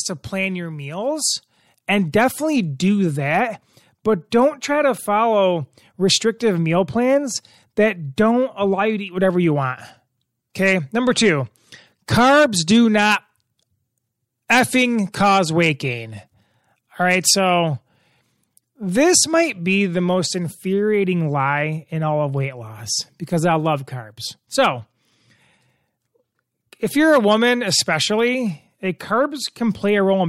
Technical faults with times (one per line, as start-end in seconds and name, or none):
2.12 pre-echo
4.31 pre-echo
8.16 pre-echo
10.54 pre-echo
14.48 pre-echo
15.12 pre-echo
28.99 pre-echo